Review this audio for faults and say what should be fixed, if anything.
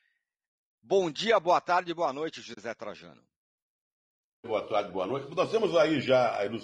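Low-delay AAC compression is the likely cause of the roughness throughout. A low-delay coder's short frames resolve voice harmonics poorly, and the result fits a budget near 32 kbps, so the speech sounds plainly grainy, with noise filling between harmonics and a thin, synthetic top band. Raising the bitrate or using a longer-frame codec mode where latency allows would prevent this.

AAC frame loss with muting occurs from 2.53 to 2.58 s, right after "boa tarde boa noite". Missing frames were decoded as silence, so roughly 40 ms of speech, which fits two lost frames, fades to a soft-edged hole. Packet-loss concealment or forward error correction on the transport would prevent this.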